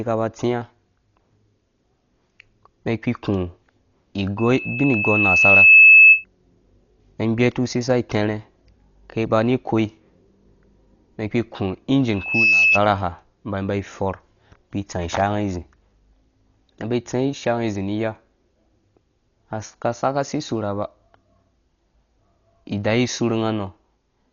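Speech, heavily band-limited, with nothing above about 6.9 kHz. The sound is dull and coarse, with rough, fluttering noise around tonal parts. This is likely Dolby Digital compression at a very low bitrate, around 40 kbps, where many frequency lines get no bits and are filled with noise. A loudspeaker feedback squeal at 2.6 kHz runs from 4.38 to 6.25 s. It swells over about a second and a half to roughly 15 dB above the speech. A shorter one, from 12.15 to 12.80 s, builds within a fraction of a second and peaks about 5 dB above. A microphone is picking up its own loudspeaker, and the loop gain exceeds one at that frequency.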